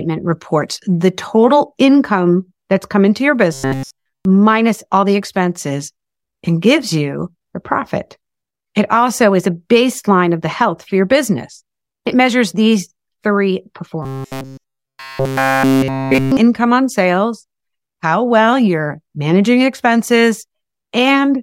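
Audio likely arrived too seldom, so playback looped a buffer of about 7.5 ms and skipped the real signal. The result is robotic sound from repeated short buffers, a rigid 134 Hz metallic buzz from 3.53 to 4.25 s after "that's come into your" and from 14.03 to 16.37 s before "on sales how well".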